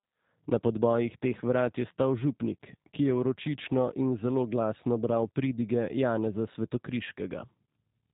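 From start to finish the speech has passed through a G.729 codec, and the damage is plainly audible. Content above about 3.8 kHz is gone, and each short frame is rebuilt from a filter, pitch predictor and a few pulses, giving a rough, synthetic edge consistent with 8 kbit/s.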